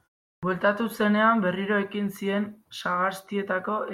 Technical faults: clipped start after a pause

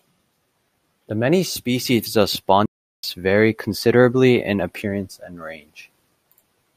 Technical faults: playback stall

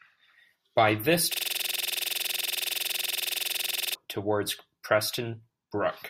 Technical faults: system hang loop

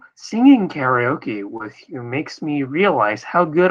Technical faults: short concealed packet loss

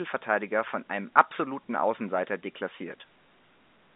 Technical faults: none

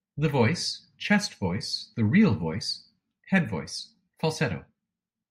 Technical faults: none

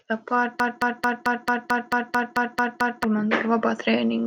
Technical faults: broken-record loop

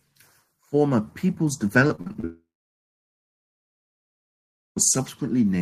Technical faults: repeated packet loss (robotic sound); long network dropout

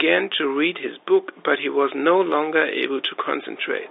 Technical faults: none

